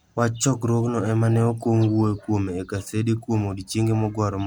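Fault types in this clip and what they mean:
No faults detected: no dropouts, clipping, glitches or other transport or processing errors are audible anywhere in the clip.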